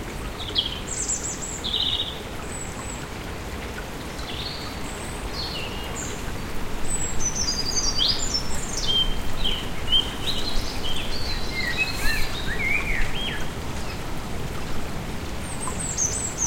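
Nothing in this recording of sounds stands out as a technical fault; it just runs along without any glitch catching the ear.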